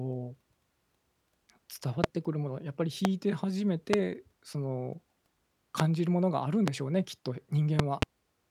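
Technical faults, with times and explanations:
2.04–2.06 s, 3.05–3.08 s, 3.93–3.96 s, 5.80–5.82 s, 6.68–6.70 s and 7.79–8.05 s, loud pop: sharp pops roughly 20 to 25 dB above the speech, the first five each about 25 ms long, with two in quick succession in the last span. The speech continues underneath. The likely cause is a sudden voltage pulse, from a plug, switch or static discharge, added to the signal and shaped by the circuitry after it.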